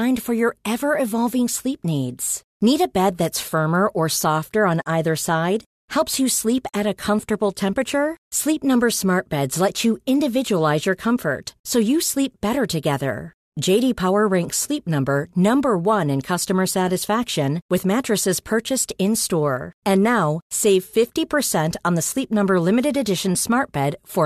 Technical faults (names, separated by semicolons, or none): none